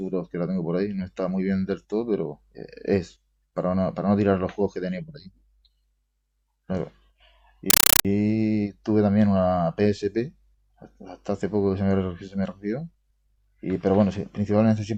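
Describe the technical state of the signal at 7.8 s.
From 7.70 to 8.05 s a compressed stream is played as audio: undecoded AC-3 frames become loud 8 ms static bursts repeating 31.25 times a second.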